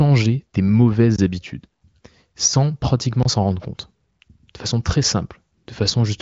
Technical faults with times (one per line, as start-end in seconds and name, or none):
1.16-1.18 block of digital silence
3.23-3.25 block of digital silence